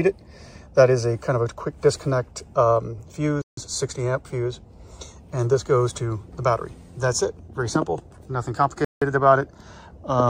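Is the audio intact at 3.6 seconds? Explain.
Yes, just barely: a Bluetooth stall cuts to about 157 ms of silence from 3.42 to 3.57 s, likely a drained headphone buffer waiting on resent packets, then picks back up.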